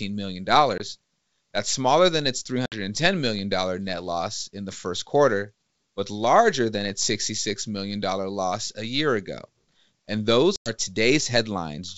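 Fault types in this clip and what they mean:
Packet loss on an ADPCM call: abrupt silent holes near 0.78 s, at 2.66 to 2.76 s between "that's smaller than its" and "million net loss in", and at 10.56 to 10.71 s, losing 20, 60 and 100 ms. The decoder's predictor and step size drift from the sender's, so sound returns with brief slight distortion. Waveforms show flat near-silent stretches with sheer edges, and spectrograms show blank vertical bands.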